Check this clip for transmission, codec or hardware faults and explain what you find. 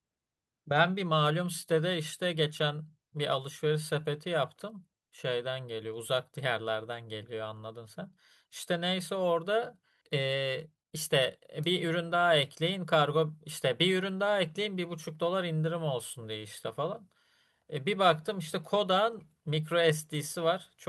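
Two transmission faults are audible, both around the 10-second mark.

At 10.01 to 10.03 s there is a skip ahead. About 0.7 s of speech was dropped, and playback jumps forward with no gap filling the join.

From 10.18 to 13.03 s comes a jitter buffer speed-up. The buffer trimmed tiny pitch-period slices to recover roughly 0.2 s, so speech runs at 107% speed with unchanged pitch.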